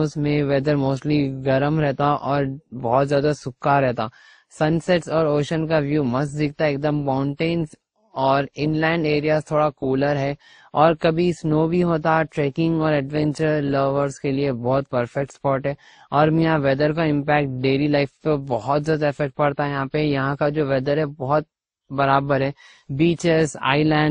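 Throughout the speech, the artefacts of several different codecs sit together, with nothing above 19 kHz. This is likely transcoding between lossy codecs: the sound points to low-bitrate MP3, then Opus, then WMA, each re-encoding earlier artefacts.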